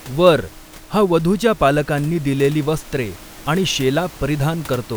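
There are no technical faults to describe in this speech, only room noise sitting about 22 dB below the talker as part of the recording.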